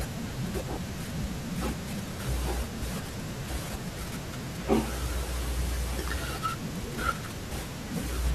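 At 0.70 s the speech has a repeated buffer: new audio arrived late, so the device played its last block once more. The block lasts about 1.33 ms, which fits a 64-sample buffer, and about a millisecond and a half of real audio is lost. With so short a piece the repeat is heard as a click or brief buzz. On a waveform, two identical tiny segments sit back to back with a hard step at each join. On a spectrogram, a thin vertical line spans the frequencies.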